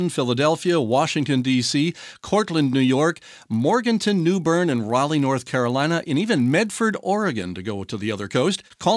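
A resampler restarted on every block runs throughout this speech clip, leaving a 50 Hz buzz under the voice that drops away in the pauses. The converter, which fits a 48 kHz to 24 kHz conversion, handled each 20 ms block in isolation, so at every block edge it lacked the true neighbouring samples and produced a small error. Fifty such errors a second fuse into a steady buzz tied to the signal.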